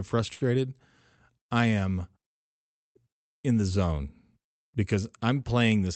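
A short stall from a late packet occurs at 0.33 to 0.43 s: the jitter buffer ran dry, so the receiver stretched the last speech sound for about 75 ms, then resumed from the same point, heard as a held, slightly buzzy sound with nothing lost.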